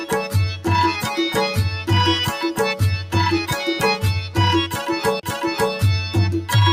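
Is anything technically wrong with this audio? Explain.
Yes, there are two faults.

Noise suppressor applied to music or sounds runs through the whole clip. A suppressor tuned for speech misreads sustained tones, room ambience and decay as noise and pulls them down, while sharp onsets pass more freely. The gain level swings by roughly 5 dB, so held sounds and tails dip and recover, giving a pumping, fluttering and thinned character rather than a steady body.

A CD skip occurs from 5.20 to 5.23 s. A disturbance made the pickup laser lose its track and land on a different turn of the disc's spiral, so the player briefly mutes, here for about 30 ms, and then resumes from another point in the material. It is heard as a short gap followed by an abrupt discontinuity, where the sound jumps rather than continuing smoothly.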